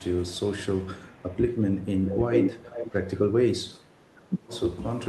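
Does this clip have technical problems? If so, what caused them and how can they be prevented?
Yes. The clip is speech with two related problems.

Echo leak appears at 0.24–0.36 s, 0.80–1.36 s and 1.81–1.89 s as a faint copy of the voice trailing by 333 ms, about 30 to 35 dB below the speech. From 2.05 to 3.2 s it returns with a 425 ms delay, roughly as loud as the talker. The likely cause is a loudspeaker on the far end whose echo canceller let part of its microphone pickup through. Unlike room reverberation, this is a distinct, late repeat rather than a smooth decaying tail. A headset, or an echo canceller with a longer, better-converged filter, would prevent it.

Speech suppressed in double talk shows as the talker's level likely being pushed down while the other side is also present. There is a brief dip of about 10 dB around 1.37–1.42 s, a deeper stretch of about 20 dB within 1.94–2.67 s (roughly 400 ms affected), and a dip of about 15 dB within 3.84–4.23 s. 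Unlike packet-loss dropouts, these are level ducks that coincide with overlapping talk, not clean silent gaps. Better double-talk detection, or reducing the echo itself so the suppressor needn't clamp down, would prevent it.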